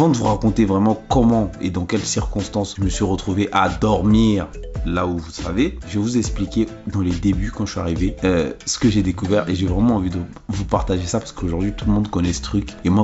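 Nothing is technically wrong with this audio; there are no faults to time or trace to a cause.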